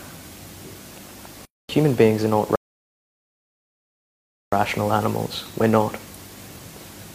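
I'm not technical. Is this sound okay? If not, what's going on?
No. At 2.56 s the sound drops to silence for about 2 s, a rebuffering stall: playback ran out of downloaded audio, waited, then resumed at 4.53 s exactly where it stopped.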